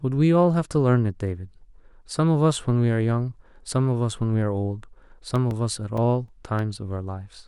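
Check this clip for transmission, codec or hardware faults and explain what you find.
One fault: CD scratch ticks from 5.36 to 6.59 s, about seven per second, each a few milliseconds at most. A disc blemish defeats error correction every rotation, leaving periodic clicks that show as thin vertical spectrogram lines and brief waveform flat spots.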